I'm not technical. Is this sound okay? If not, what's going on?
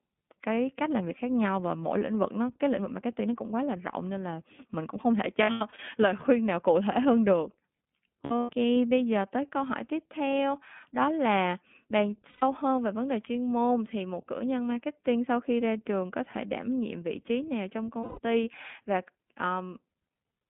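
No. Two related problems are audible in this speech recording.

The first runs through the whole clip: it has passed through the iLBC codec, a compression system built for internet phone calls. It keeps only a narrow phone-line band, roughly 200 Hz to 3.6 kHz, so the voice sounds thin and boxed-in, with a slightly rough, artificial edge. Unlike simple muffling, which only dulls the top, this adds a grainy, synthetic quality to the voice itself.

The second is lost iLBC frames, where small chunks of the call never arrived. This happens at 5.43 to 5.8 s, 8.25 to 8.5 s, 12.29 to 12.43 s and 18.0 to 18.19 s. In the first two, the gaps are scattered, with the longest stretch lasting about a tenth of a second. In each gap the decoder fills in by repeating the last bit of voice mixed with noise, so you hear a brief, held, buzzy or breathy vowel rather than silence or a click. Each 30 ms chunk is coded on its own, so the voice snaps back to normal almost immediately.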